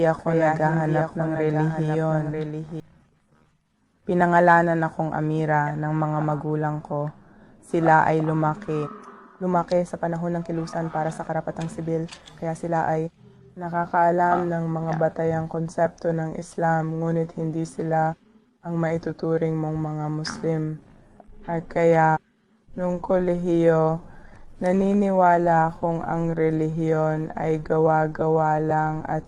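A doubled audio track runs from the very start until 2.8 s: a second, full-band copy of the sound trails about a second behind, roughly 5 dB quieter, with no decay or room colour. It stops abruptly at 2.8 s, likely from the sound being captured twice through a slower second path.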